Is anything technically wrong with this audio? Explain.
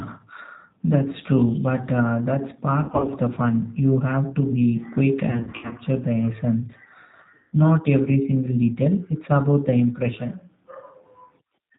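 Yes. Throughout, the G.729 codec at 8 kbit/s rebuilds the speech from a vocal-tract model, leaving it rough and synthetic. A spectrogram shows nothing above 4 kHz.

There is VoIP packet loss concealed by the speech codec at 2.84–3.08 s, 5.31–5.78 s and 7.36–7.53 s. The decoder extends the last frame, producing fading buzzy or noisy patches that appear as smeared harmonics and a sagging waveform envelope.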